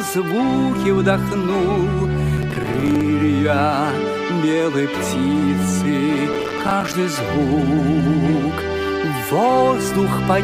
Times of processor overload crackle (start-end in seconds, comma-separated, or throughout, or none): 2.37-3.01, 6.33-6.94